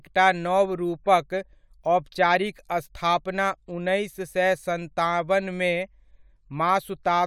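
Speech recording, no technical faults detected.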